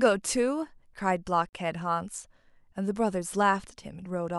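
A speech clip with a gap at a join of encoded pieces: from 1.49 to 1.53 s the sound drops into about 40 ms of silence, then resumes exactly where it left off. That fits separately encoded segments of about 4 s joined without trimming the encoder's start-up delay and last-frame padding. Unlike a dropout from lost data, nothing of the speech is missing, and the gap's edges are smeared by the codec rather than cut cleanly.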